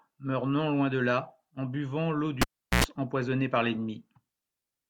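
A live cable was pulled and plugged in again partway through this speech clip, just after "là en buvant l’eau": a pop at 2.42 s, about 0.38 s of near silence, a 95 ms burst of 60 Hz mains buzz as the tip reconnects, then another pop before "empoisonnée par" at 2.84 s.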